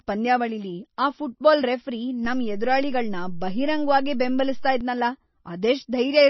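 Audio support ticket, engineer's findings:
Likely MP3 compression at a low bitrate, consistent with about 24 kbps. Heavy watery, swirly speech with smeared attacks throughout. Nothing above 5.9 kHz.

DC step: waveform zero line jumps at 2.25 s, holds, returns at 4.81 s; probable converter recalibration or offset input switched in. Low thump or click at each step, with the speech itself unchanged.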